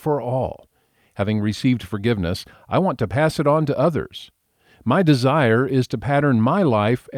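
No technical faults can be heard anywhere in the speech recording; the signal stays continuous and steady in level throughout.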